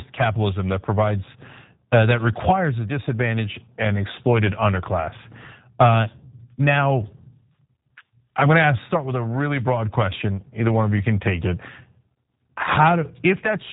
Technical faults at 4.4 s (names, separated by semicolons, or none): G.729 codec